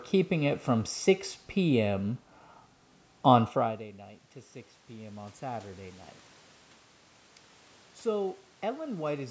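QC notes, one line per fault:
4.87 to 6.09 s, automatic gain rising: the input dropped about 19 dB. The gain control slowly added about 5 dB, so voice and room noise swell together.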